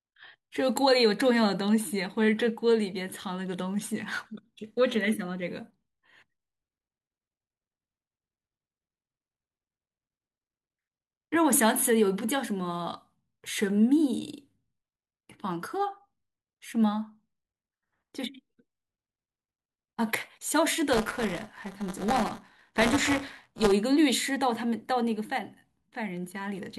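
From 20.92 to 23.72 s the speech picks up a steady robotic rattle at 200 Hz, which is classic buffer tearing. The writer and the playback side of the ring buffer have drifted until they cross mid-period, so in every 5 ms chunk roughly a tenth of the audio is stale material from about 15 ms earlier, butted up against fresh audio with hard edges. Those repeating splices give the buzz, and it only rides on the signal itself.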